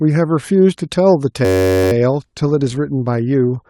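At 1.45 s the speech suddenly locks into a system hang loop that lasts until 1.92 s. Something froze upstream while the playback hardware kept cycling the same tiny ring buffer, so one 10.67 ms slice repeats over and over. At that length it fuses into a steady buzz at about 93.8 Hz, which fits a 512-sample buffer. When the loop releases, the speech picks up with essentially nothing missing.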